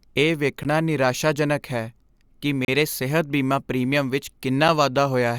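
At 0.63 s, just before "ਨਿਰਾਸ਼ਾਜਨਕ ਹੈ ਕਿ", the speech drops out for about 15 ms, then again from 2.65 to 2.68 s (about 33 ms) before "ਸਿਹਤ ਬੀਮਾ ਪ੍ਰੀਮੀਅਮ ਵਿੱਚ", and at 4.68 s for about 6 ms. Each is a gap between stream segments: the timestamps of consecutive 2 s segments leave a hole that playback fills with silence, so the dropouts recur every 2 s while no audio is lost. On a waveform each shows as a flat, hard-edged silent run; on a spectrogram, a clean vertical blank strip.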